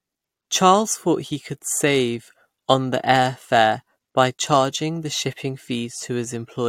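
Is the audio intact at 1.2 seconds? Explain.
Yes, the speech at 1.2 seconds comes through intact, with no dropout, click, distortion or other fault at that moment.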